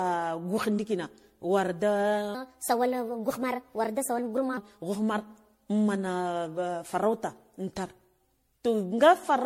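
Generation loss runs through this whole speech clip: the sound is swirly, smeared and hollow, attacks blur, and nothing remains above 16.5 kHz, which fits repeated re-encoding through a 64 kbit/s MP3 chain, likely around ten passes, each re-quantising on a shifted frame grid so noise and spectral gaps pile up. A section at the wrong speed runs from 2.35 to 4.57 s, where the audio plays 1.24 times too fast, raising the pitch by about four semitones and hurrying it, likely from that stretch being played back against the wrong clock.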